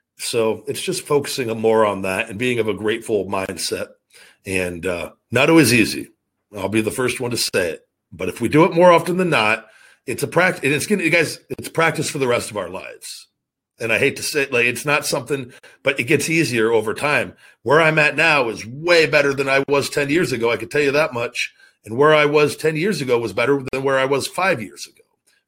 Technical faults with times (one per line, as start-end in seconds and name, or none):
3.46-3.49 gap at a join of encoded pieces
7.49-7.54 gap at a join of encoded pieces
11.54-11.59 gap at a join of encoded pieces
15.59-15.63 gap at a join of encoded pieces
19.63-19.68 gap at a join of encoded pieces
23.68-23.73 gap at a join of encoded pieces